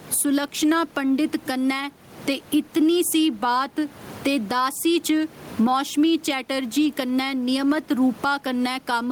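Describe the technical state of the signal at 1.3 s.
Gain pumping runs through the clip, 1.3 s included: the gain swings about 15 dB, pulling down on loud speech and squashing loud and soft parts closer in level, likely excessive input gain driving a fast limiter.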